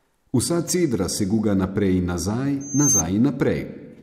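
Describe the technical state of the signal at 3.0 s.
Loudspeaker feedback squeal runs from 2.60 to 3.03 s, so at 3.0 s it is near its peak. The microphone is hearing its own loudspeaker, and at 6.3 kHz the loop gain tops unity. A piercing tone swells over about a third of a second to roughly 5 dB above the speech.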